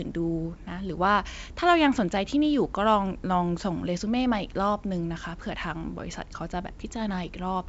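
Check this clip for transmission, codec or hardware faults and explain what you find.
Nothing to report: the speech travels over G.722 wideband telephone coding at 64 kbit/s, which keeps it within about 7 kHz.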